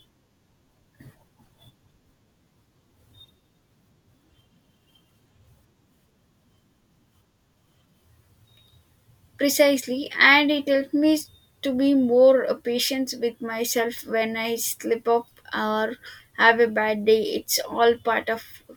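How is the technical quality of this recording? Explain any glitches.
No technical problems can be heard in this recording.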